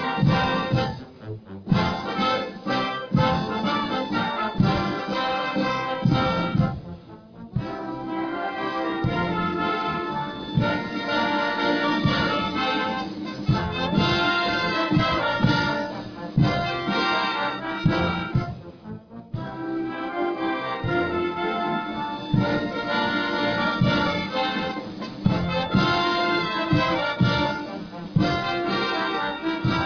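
Nothing here stands out as a technical problem; the audio just rolls along without a hitch that a careful listener would flag.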